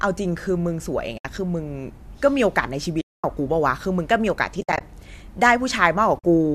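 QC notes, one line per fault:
1.18–1.25, 3.01–3.24, 4.61–4.81 and 6.19–6.24 s, AAC frame loss with muting: soft-edged dropouts of 70, 230, 120 (scattered, longest gap about 70 ms) and 50 ms. The decoder zeroes the lost frames, and the overlapping windows fade out and back in. The frame size points to ~10 ms low-delay AAC, likely.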